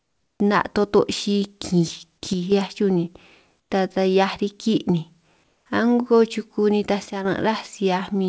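It's a speech clip over a call path that tops out around 8 kHz, which fits G.722. Three pauses get comfort noise in place of the background: 0.0 to 0.4 s, 3.60 to 3.70 s between "chuj ni" and "ta taj", and 5.44 to 5.66 s between "riki' ni" and "a'ngo chuku nitaj". There the real room tone turns flat and featureless, about 3, 7 and 2 dB quieter, likely discontinuous transmission filling gaps with synthetic noise. One channel drops out at 2.33 to 2.52 s and 7.06 to 7.25 s, the second right after "a'ngo chuku nitaj". The level dips abruptly by about 6 dB, likely one stereo side vanishing before the mono sum.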